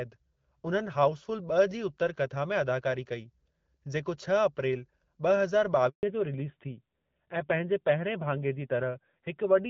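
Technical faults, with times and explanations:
5.89 to 6.03 s, handover gap: the call switched networks and no speech frames arrived for 140 ms, so the audio drops to silence until the new link carries sound.
6.03 s to end, fallback to narrowband: the call left HD Voice at 12.65 kbit/s for a narrowband codec, likely AMR-NB at 7.4 kbit/s, so nothing above 4 kHz remains and the speech sounds duller and rougher.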